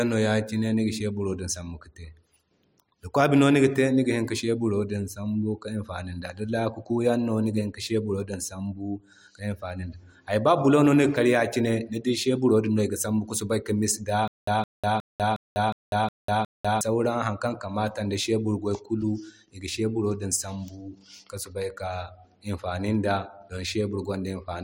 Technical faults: stutter with silent gaps

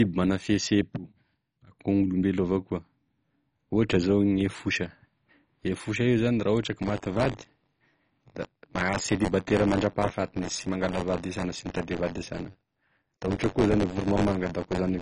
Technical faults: MP2 compression; buffer tearing

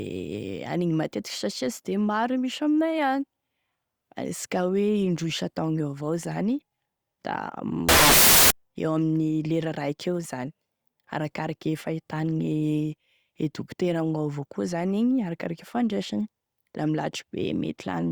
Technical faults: samples built from the wrong bytes

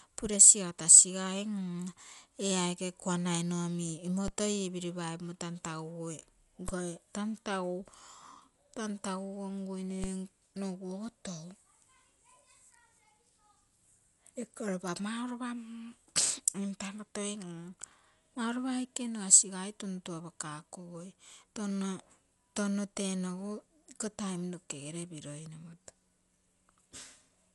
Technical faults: Dolby Digital compression; DC step

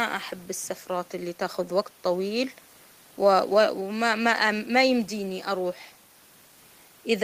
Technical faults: none

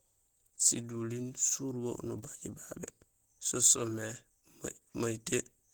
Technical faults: Opus compression

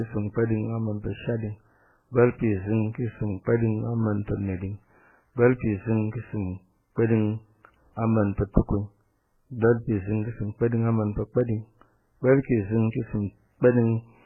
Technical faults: transcoding between lossy codecs

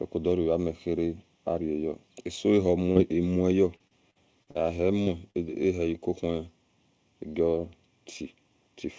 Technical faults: channel delay (comb filtering); repeated packet loss (robotic sound); short concealed packet loss

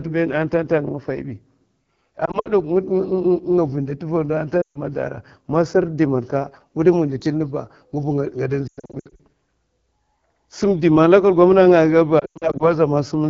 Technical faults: AMR wideband (HD Voice) codec; lost AMR speech frames

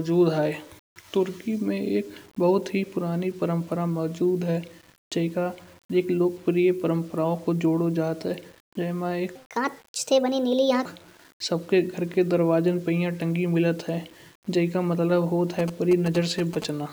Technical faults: low bit depth without dither; section at the wrong speed

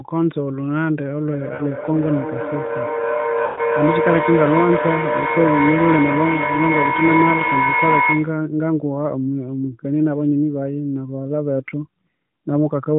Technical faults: feedback howl; lost AMR speech frames

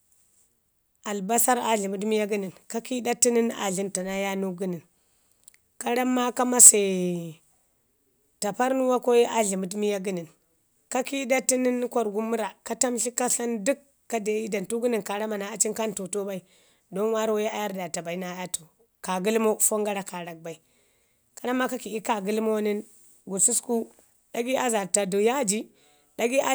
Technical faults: hard clipping

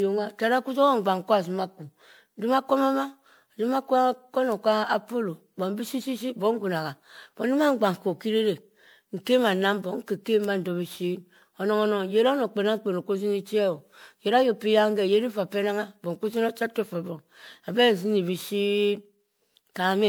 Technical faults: generation loss

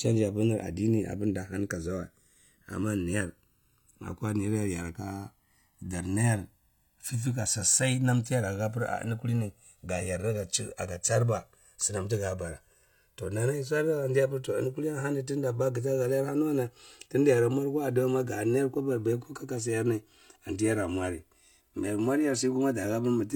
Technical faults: channels drifting apart

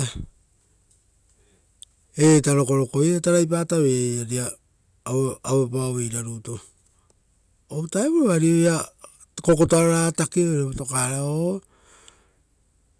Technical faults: none

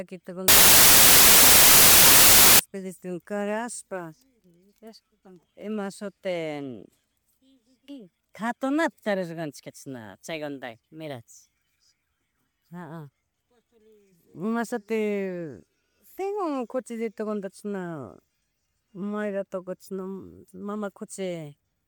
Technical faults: wrong sample width

